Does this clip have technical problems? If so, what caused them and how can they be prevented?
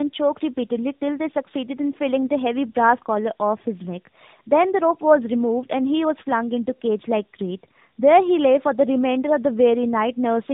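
Yes. Tandem speech coding runs through the whole clip: the speech sounds rough, muffled and warbly, with nothing above 3.7 kHz. The sound fits two AMR-NB coding stages in a row, at roughly 10 to 12 kbit/s, joined by a G.711 link. At each border the speech was decoded and coded again, so the second AMR-NB coder worked on audio the first had already degraded, and their errors added up. To prevent it, carry the coded speech end to end without transcoding, using transcoder-free operation or a single shared codec across the links.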